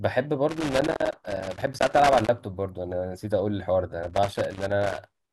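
A speech recording with two bursts of loose connector crackle, the first from 0.49 to 2.29 s and the second from 4.03 s through to the end at 5.32 s. In each stretch the signal is chopped by an irregular, scratchy crackle, the sound of a worn or dirty contact making and breaking as the plug shifts, with pops where any DC on the line jumps in and out. The ragged, uneven timing sets it apart from the steady, periodic ticks of digital clicks or buffer dropouts.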